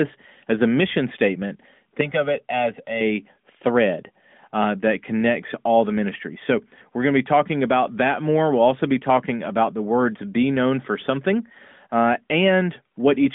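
Just after "as a mission statement", from 2.01 to 3.01 s, the speech turns hollow and phasey. This is channel delay causing comb filtering. One channel runs late by roughly one and a half milliseconds, and the two are summed to mono. Where the copies arrive out of step, they cancel. The first notch falls around 300 Hz, with more at regular steps above it. Through the narrow phone band, the speech sounds thin.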